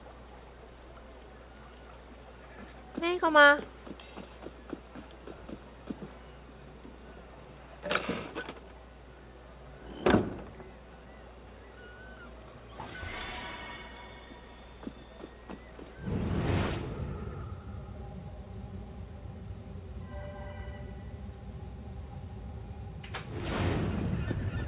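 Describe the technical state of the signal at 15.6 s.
At 15.6 s the signal is intact, with nothing present beyond the narrow band of a telephone-grade call path that carries nothing above 4 kHz.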